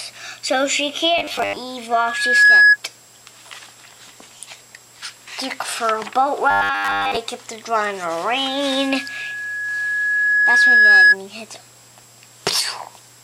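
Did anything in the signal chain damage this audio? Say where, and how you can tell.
Yes. Robotic sound from repeated short buffers appears at 1.18–1.56 s and 6.51–7.17 s, a rigid 100 Hz buzz replacing most of the material. That rate fits a 10 ms block being replayed, likely a driver or buffer underrun where late data forces repeats.

Loudspeaker feedback squeal, an acoustic loop at the playback stage, occurs at 1.91–2.77 s and 8.48–11.16 s. A 1.7 kHz tone swells to about 15 dB above the signal, in roughly half a second the first time and about three seconds the second, as the microphone re-amplifies the speaker's output.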